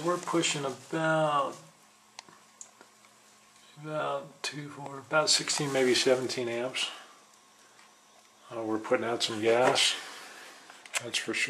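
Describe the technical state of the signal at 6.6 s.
At 6.6 s the signal runs intact, with no audible dropout, distortion, glitch or other fault at that point.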